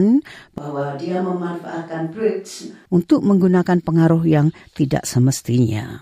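From 0.58 to 2.85 s the speech turns roomy, thin and about 10 dB quieter with more background noise, likely a switch to a distant microphone, snapping back before "untuk menggunakan".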